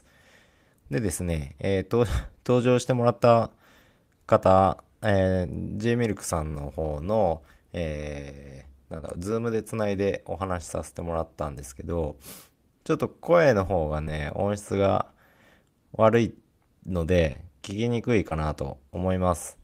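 At 6.49–6.53, 8.97–9.00, 14.04–14.08, 17.32–17.37 and 18.29–18.33 s there is short concealed packet loss. Each time 20 ms never arrived, and the receiver bridged it by extending the preceding sound. The result is a brief smear rather than a silent gap or click.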